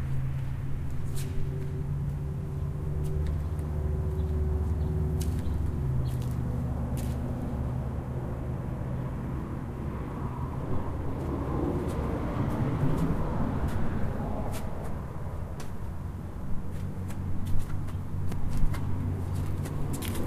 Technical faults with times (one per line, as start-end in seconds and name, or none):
17.67-18.75 CD scratch ticks